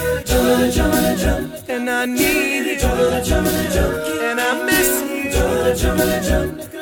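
From 2.93 s to 5.08 s a Bluetooth SBC bit pool drop sets in: the link appears to congest, and the encoder falls back to a much smaller bit budget, consistent with the bit pool halving from about 31 to 16 and a rate near 110 kbps. The upper sub-bands lose their bits, so the treble goes dull while gritty quantisation noise rises. A spectrogram shows the top band abruptly cut away and grainy noise filling the lower bands, with full bandwidth returning at 5.08 s.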